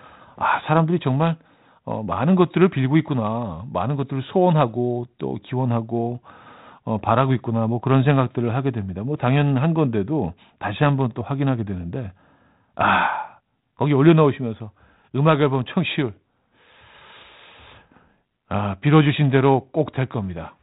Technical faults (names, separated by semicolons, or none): none